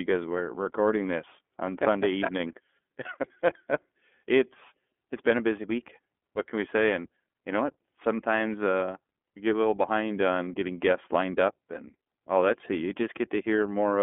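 iLBC codec coding runs through the whole clip. The speech is squeezed into a telephone band of about 250 Hz to 3.4 kHz, so it sounds thin and boxy with no sibilant sparkle. Each short block of speech is coded on its own, with no carry-over from the block before, which gives a plainly audible rough, slightly synthetic grain. The coarseness fits iLBC's 13.33 kbps mode with 30 ms frames.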